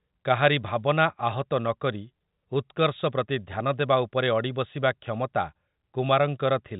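No technical faults turn up anywhere in the speech, which carries the expected narrow telephone band of G.711 telephone coding with nothing above about 3.8 kHz.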